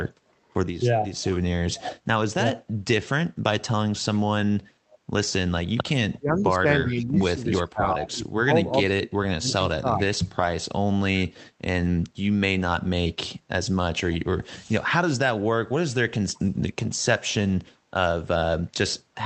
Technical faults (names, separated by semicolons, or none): echo leak; speech suppressed in double talk